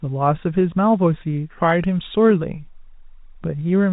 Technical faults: none

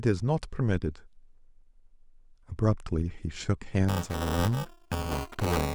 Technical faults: buffer tearing

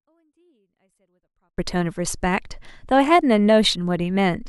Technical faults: 24-bit alignment error (too quiet)

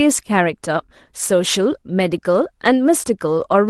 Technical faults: sample clock jitter; lost packet rebuilt from error correction

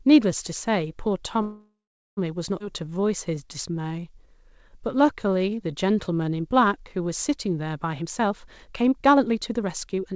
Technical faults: call audio freeze; skip ahead; jitter buffer slow-down; jitter buffer speed-up

